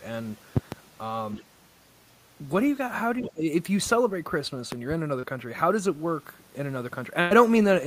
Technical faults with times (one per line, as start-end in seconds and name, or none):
0.57-0.75 loud pop
1.37-1.44 other side's voice leaking through
3.20-3.28 other side's voice leaking through
3.21-3.44 speech suppressed in double talk
4.72-4.94 loud pop
5.19-5.25 short concealed packet loss
7.21-7.32 burst of packet loss